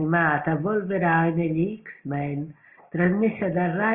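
A short speech recording with nothing technically wrong with it.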